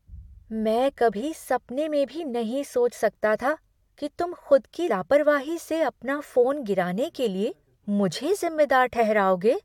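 At 4.88 s, right after "कि तुम खुद की", a brief burst of damaged data in the compressed stream cuts into the speech. Some bytes in that stretch of the file were lost or corrupted, so the decoder misread the frame, lost sync and had to find the next valid header. It is heard as a short glitch in the speech, a chirp, squawk, click or brief hole.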